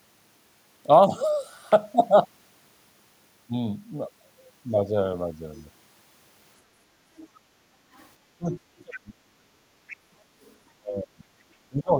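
From 7.17 to 7.4 s a faint second voice sits under the talker, roughly 25 dB down. It is likely the other side's voice leaking through: loudspeaker playback that the echo canceller failed to remove from the microphone. It returns more faintly at 7.95 to 8.08 s, and more clearly, around 20 dB down, at 8.79 to 8.96 s and 9.88 to 10.55 s.

Between 7.46 and 7.72 s the room tone dips by up to about 6 dB for a short stretch, close to 150 ms in all. This is background gated by the echo canceller, which pulled the microphone down while the loudspeaker was active and then released it.

From 8.38 to 9.53 s the talker's speech drops away in pieces, with the deepest cuts somewhere around 35 dB, adding up to about a second. The same happens from 10.74 s to the end. This is speech suppressed in double talk, likely because both sides spoke at once and the canceller turned down the talker along with the echo.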